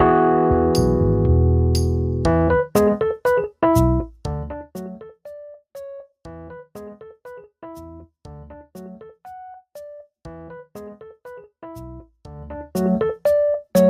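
A fine ticking, zipping texture rides on the sound from 3.81 to 5.16 s while the level falls by roughly 20 dB, and again from 12.31 to 12.94 s as it climbs back up by a similar amount. This is zipper noise: each gain change is applied in coarse unsmoothed steps, around a hundred per second, and every jump leaves a tiny click.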